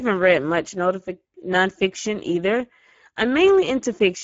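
From start to finish the speech carries Speex codec damage, plainly audible, with a rough, hoarse, noisy texture where the excitation is starved of bits. That points to a bitrate near 9.8 kbps. Nothing comes through above about 7.7 kHz, and what sits high up sounds like shaped noise fill.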